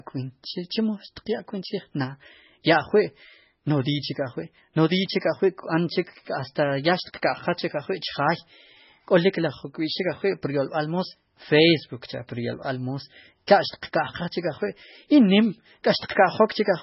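The speech runs under heavy MP3 compression from start to finish, and the treble stops dead at about 5.6 kHz, leaving a flat ceiling across the whole spectrogram. The likely cause is a bitrate starved to around 16 kbps, which fits the swirly, watery texture: weak frequency lines blink on and off between frames, so s sounds turn metallic and chirpy. On a spectrogram that shows as speckled, patchy energy below the cutoff, and consonant onsets look smeared.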